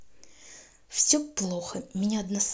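No technical faults can be heard at any point in this speech recording.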